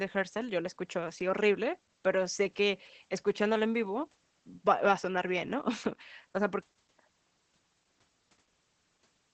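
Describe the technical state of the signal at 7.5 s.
At 7.5 s, as through the whole clip, the speech is under Opus voice compression in its SILK linear-prediction mode. The coder has cut the band to wideband and spends few bits on the excitation, which fits a low bitrate around 12 kbps. Nothing is left above 8.6 kHz, so sibilants and breath lose their top and the speech sounds muffled. The coarse excitation coding makes the speech plainly hoarse and slightly robotic.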